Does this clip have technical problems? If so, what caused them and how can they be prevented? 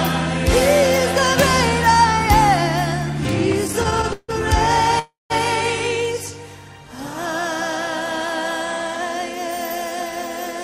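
Yes. At 3.52 to 3.54 s there is a loud pop, a single sharp click that peaks a little above the surrounding level while the sound carries on beneath it. A sudden voltage step, likely from a plug, switch, static discharge or driver glitch, was added to the signal and shaped by the following circuitry. Unlike a dropout or stall, nothing is interrupted and no time is lost; it is an extra impulse laid on top. Secure cables and connectors, avoid switching or plugging equipment during recording, and keep drivers stable.

From 3.67 to 4.30 s the audio shows repeated stalls (stutter): six brief hold-ups, the longest about 155 ms, together filling about 210 ms, roughly a third of that stretch. Packets arrived late or too slowly, the jitter buffer kept running dry, and the receiver extended the last sound each time before resuming. Nothing is skipped, which separates this from packet loss; the sound drags and hiccups instead of jumping. 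A steadier network path and a larger adaptive jitter buffer would prevent it.

At 4.99 to 5.32 s there is a call audio freeze: one continuous hold of about 309 ms, the last sound stretched and fading, with about 170 ms of it near silence, after which the audio resumes exactly where it stopped. The cause is likely a single burst of network delay that emptied the jitter buffer. It differs from the stutter by being one longer stop rather than a train of short catches, and from a dropout because no material is missing. Reducing congestion and prioritising call traffic with QoS would prevent it.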